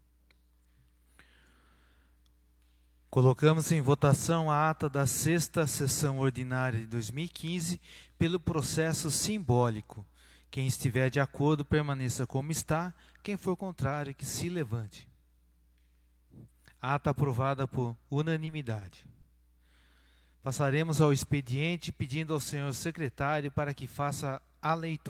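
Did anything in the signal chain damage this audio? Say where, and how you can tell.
Yes. Network. Short concealed packet loss at 18.45 to 18.53 s and 19.21 to 19.25 s: brief smears where about 40 ms and then 20 ms went missing and the decoder extended the previous sound.

A short stall from a late packet at 18.79 s. One sound is held about 20 ms too long while the empty jitter buffer waited. Nothing is lost.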